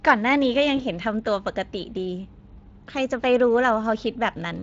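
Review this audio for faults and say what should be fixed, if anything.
Across the whole speech clip the sound is hoarse and grainy, with a noisy, artificial top end. This is Speex codec damage: the CELP coder has too few bits to model the excitation, which fits a bitrate of around 20 kbps. Encoding at a higher Speex quality setting, or switching to a modern codec such as Opus, would prevent this.

From 0.77 to 0.84 s the speech smears into a brief, stretched, fading sound and stays weak just after it. This is VoIP packet loss concealed by the speech codec. The sound points to a single lost 20 ms frame. The decoder filled the gap by repeating its last pitch and filter at falling gain, and because each frame builds on the last, the distortion lingered after packets returned. A jitter buffer with forward error correction or redundancy would prevent this.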